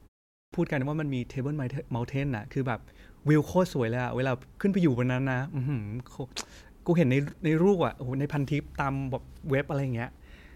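At 0.33 s the speech is swallowed, and nothing returns until 0.53 s, when it bursts abruptly out of silence with its opening sounds missing, so about 195 ms is lost. This is a clipped start after a pause: the output device slept through the 0.33 s of initial silence and needed time to wake.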